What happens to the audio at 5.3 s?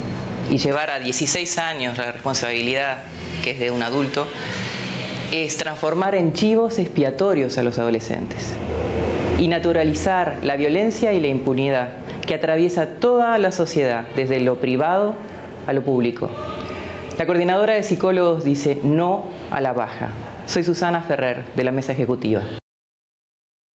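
Pre-emphasis left on runs from 0.72 to 6.05 s, covering 5.3 s. A treble boost matching the J.17 curve, about 11 dB at 10 kHz relative to 1 kHz, was never undone by the matching de-emphasis, so the sound is thin, bright and sibilant.

Gain pumping is also present at 5.3 s and throughout. Loud and soft parts sit closer in level and the sound is squashed, with level swings of around 15 dB. The likely cause is input gain set far too high, with a fast limiter clamping down on every peak.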